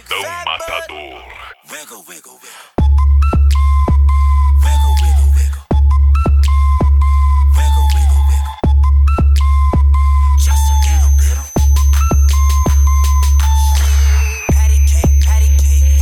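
A switching power supply runs in an audible burst mode or beats with another one from 10.38 s to the end, adding a switching supply whistle near 6.1–6.4 kHz, about 20 dB down.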